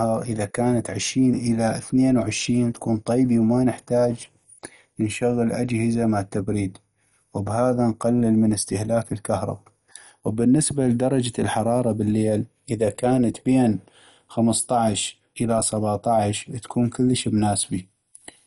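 Throughout the speech, a dull, gurgling, granular texture, likely from MP2 compression at a rate fitting 48 kbps; a spectrogram shows nothing above 11.3 kHz.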